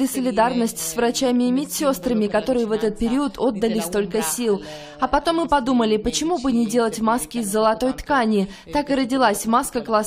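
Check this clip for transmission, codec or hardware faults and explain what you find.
No transmission, codec or hardware faults found here.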